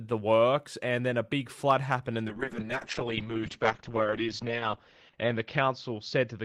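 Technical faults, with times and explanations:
2.28 s to the end, call bitrate drop: Right after "big flood happened and", the audio loses its top end and turns coarse. The call's bandwidth estimate fell, so the encoder had far fewer bits to spend. The sound points to a fall from about 32 kbps to about 7 kbps. At that rate the codec cuts the band from 20 kHz to 8 kHz. The lowest rate holds for 2.39 s. It does not recover before the clip ends.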